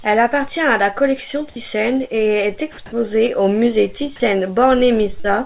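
A short piece of speech that has come through a phone-style call path, with nothing above 4 kHz, which fits a narrowband codec like G.711 mu-law, and a bit of room noise sitting about 39 dB under the voice. From 4.16 to 4.2 s the speech briefly gives way to flat, steady noise for about 40 ms, and roughly 20 ms of the actual sound goes missing before it picks back up. That's most likely sound dropped by the voice detector: the sender judged a quiet stretch to be background, stopped transmitting, and the receiver filled the gap with comfort noise until the detector fired again. Then from 5.2 to 5.26 s there's short concealed packet loss. About 40 ms of audio didn't reach the decoder in time, so the receiver stretched the preceding sound across roughly 41 ms and blended back into the real signal. You hear it as a quick smear right near the end.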